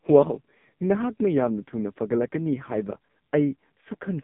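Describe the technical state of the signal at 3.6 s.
At 3.6 s the speech carries AMR narrowband mobile codec damage, present throughout. Sound sits between 150 Hz and 3.6 kHz, with nothing above 3.7 kHz. The heavy buzzy, synthetic texture, which fits a very low rate near 5 kbps, separates it from a plain telephone band filter.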